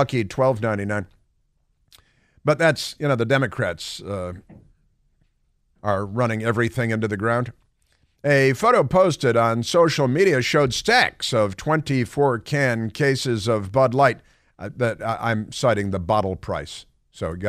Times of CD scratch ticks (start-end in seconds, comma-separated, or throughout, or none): none